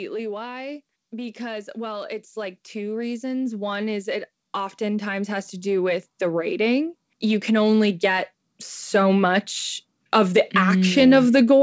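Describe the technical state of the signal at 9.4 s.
At 9.4 s the speech is intact, with no dropout, glitch or distortion, and the band stops at 8 kHz as expected from a call path consistent with a G.722 wideband codec.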